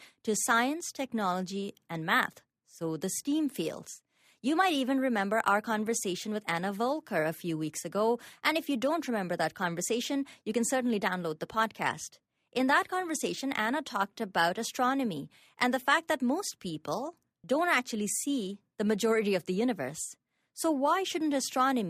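Clock slip clicks run from 0.32 s to 21.74 s, a faint tick roughly every third of a second, around a hundred in all, riding on the speech and clearest on its louder, sustained stretches. The steady rhythm points to a likely mismatch between two free-running clocks, off by something like 70 ppm, so that each time the drift builds to a whole sample, one sample is dropped or repeated and the waveform jumps slightly.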